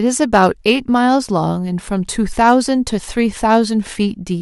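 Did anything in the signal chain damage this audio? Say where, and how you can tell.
Yes: hard clipping at a converter or gain stage. Peaks flatten from 0.22 to 0.72 s (about 3 dB over) and 2.48 to 2.53 s (about 2 dB), giving crackle.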